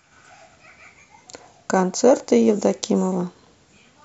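Speech with no audible faults.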